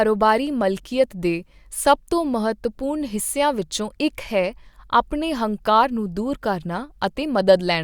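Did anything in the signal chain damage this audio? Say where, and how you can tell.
No, nothing in the signal chain stood out as having damaged this speech on listening.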